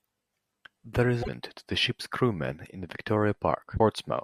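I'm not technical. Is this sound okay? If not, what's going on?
No. Damaged data in a compressed stream causes short blips, at 1.19 to 1.29 s, just before "to the ship's crew", and at 3.75 to 3.8 s. Corrupted bytes make the player briefly lose its place.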